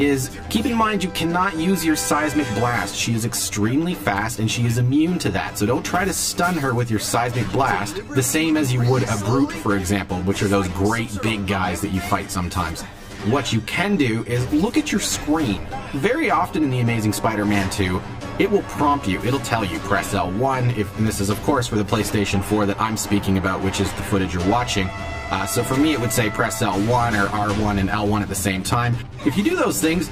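From start to finish the audio carries channel delay (comb filtering): one channel arrives around 10 ms behind the other, and when the two are summed to mono, the shared content cancels at regularly spaced frequencies. The first notch falls near 50 Hz, with further notches repeating roughly every 100 Hz above it. The result is a fixed, hollow, phasey coloration that gives the whole sound a tubular character.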